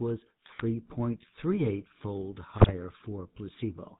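Speech runs buzzy and gravelly throughout with nothing above 4 kHz, the sound of the GSM full-rate codec, consistent with its 13 kbps pulse-excited vocal-tract model. Squawks, pops and gargling break out at 0.46–0.65 s and, at a higher bit-error rate of about 4.4%, at 2.58–2.70 s: GSM bit errors corrupting filter, pitch and gain values in the decoder.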